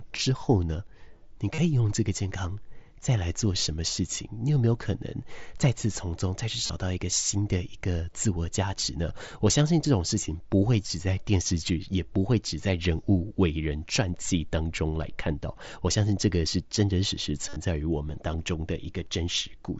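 Concealed Bluetooth headset packet loss occurs three times in this speech. At 1.54 to 1.58 s, about 37.5 ms of audio is missing. At 6.66 to 6.70 s, about 30 ms is missing. At 17.49 to 17.56 s, 60 ms of loss is spread over 75 ms, with a longest run of 45 ms. In each gap the receiver repeats the best-matching recent stretch of waveform, which produces a short buzzy tone held at full level. A slight warble follows as real audio resumes through the mSBC link.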